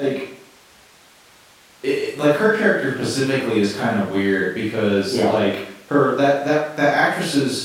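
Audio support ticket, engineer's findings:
Listened through the speech recording in full; nothing stood out, no findings to log.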